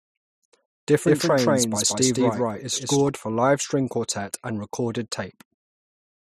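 From 1.07 s to 3.09 s the speech is heard twice. A doubled audio track trails about 200 ms behind, at roughly the same level. The copy is full-band and dry. It starts and stops abruptly. A second, slower capture path is the likely cause.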